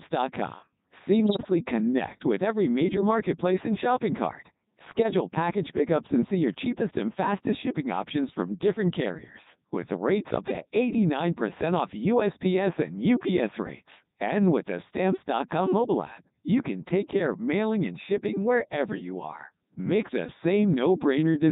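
Throughout, the speech carries the signature of the Codec 2 vocoder, consistent with its 3.2 kbit/s mode. Only pitch, voicing, energy and spectral envelope survive; the decoder rebuilds the voice from sine waves, so it sounds heavily robotic and buzzy, with the original waveform gone.

From 1.25 to 1.50 s and again from 4.92 to 5.14 s, bit errors on digital voice radio corrupt the frame parameters at a rate of a few percent. Pitch, level and tone colour jump erratically, and the voice breaks into bleeps, warbles and garbled robotic sound.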